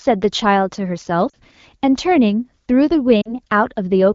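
At 1.29 to 1.35 s and again at 3.21 to 3.35 s, lost AMR speech frames interrupt the speech. Each gap fits two missing 20 ms frames. The decoder repeats its last good settings at falling gain. The speech drops to near silence, then returns rough for a moment.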